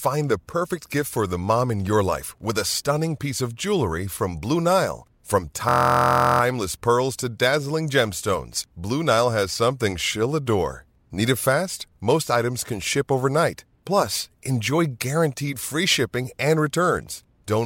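From 5.69 to 6.41 s the system stalled while the sound hardware kept replaying its ring buffer, a system hang loop. One 23 ms slice of speech repeats about thirty times, which fits a 1024-sample buffer, and is heard as a steady 43 Hz buzz.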